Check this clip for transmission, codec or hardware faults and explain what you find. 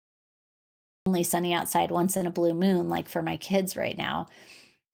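Two faults are present: a cut-off start and a short stall from a late packet.

From 0 to 1.06 s there is only digital silence. The speech then begins abruptly at 1.06 s, partway into a sound. This is a cut-off start. Capture or streaming began late, so the opening of that sound was never recorded. There is no natural onset and no fade-in. The sound simply switches on from dead silence.

At 2.17 s comes a short stall from a late packet, lasting until 2.23 s. A packet arrived after it was due, and the jitter buffer ran dry. The receiver held the last sound for about 37 ms while waiting. It then resumed from the same point, so no speech is lost. Everything after this point runs 37 ms later. The held sound is briefly stretched, with a slight buzzy or flat quality.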